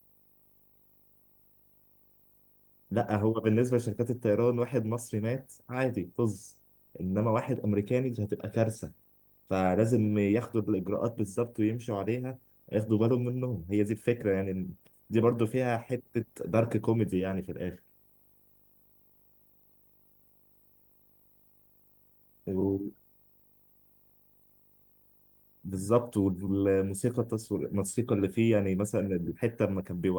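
Video or display buzz runs throughout the speech: a screen or video cable is leaking into the audio path, leaving a 50 Hz buzz at the picture's field rate with hash above it and a faint 15.6 kHz line-rate whistle, sitting well below the voice.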